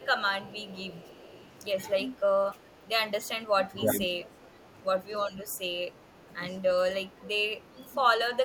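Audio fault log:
0.00–0.06 s and 0.47–1.44 s, echo leak: a faint delayed copy of the speech, roughly 30 dB below it, trails about 399 ms behind. The far end likely played the call over a loudspeaker, and its echo canceller let some of the returned signal through.
3.74–4.09 s, speech suppressed in double talk: the speech dips by around 10 dB for roughly 0.4 s. This likely happened while both sides spoke at once, so the echo canceller could not separate talker from echo and turned everything down.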